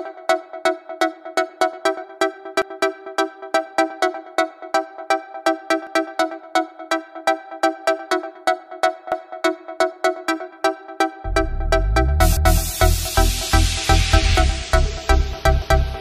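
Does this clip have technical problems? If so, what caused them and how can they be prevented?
Yes. Overlapping chunks: each 3-second chunk starts 250 ms before the previous one ends, so that slice replays as a stutter at 2.62, 5.87, 9.12, 12.37 and 15.62 s. To prevent it, set the chunk hop equal to the chunk length, or crossfade and trim the overlap at each join.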